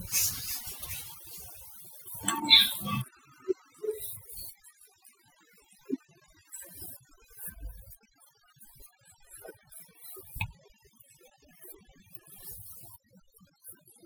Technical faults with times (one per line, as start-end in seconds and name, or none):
0.00-14.05 overdone noise removal